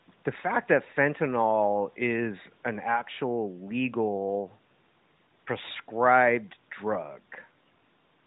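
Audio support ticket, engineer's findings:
Speech band-limited to 4 kHz with a light narrowband codec character consistent with AMR-NB at its highest rate, lowest bass trimmed by the call high-pass, no faults found.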